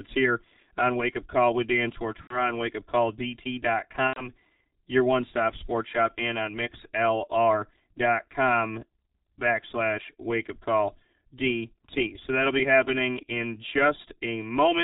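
Throughout the speech, channel delay (comb filtering) makes everything hollow and phasey. One channel lags the other by roughly 3 ms, so summing to mono cancels at evenly spaced frequencies. A spectrogram shows fixed horizontal notch bands, the first near 150 Hz.

The whole clip is also heavily damaged by the G.723.1 codec. It sounds muffled and hoarse, with smeared consonants, which fits the 6.3 kbit/s mode. On a spectrogram, energy stops abruptly at 4 kHz, and formants move in coarse 30 ms steps.

VoIP packet loss concealed by the speech codec occurs at 2.21–2.51 s and again at 4.07–4.30 s, just before "your one stop sports". Each gap points to about three lost frames, 90 ms. The decoder stretches the last sound into a buzzy tone or coloured noise that fades and stays weak afterwards. On a waveform, the envelope sags into a smooth, repetitive, decaying pattern.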